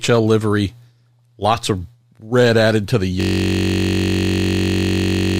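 At 3.21 s, right after "red added to the", the speech locks into a system hang loop. The computer or driver stalled, but the sound hardware kept replaying the same stretch of its ring buffer. That stretch is 21.33 ms long, which fits a 1024-sample buffer. It repeats about a hundred times, at 46.9 Hz. Because each piece is so short, it fuses into a steady, low buzz. The buzz runs unchanged to the end of the clip.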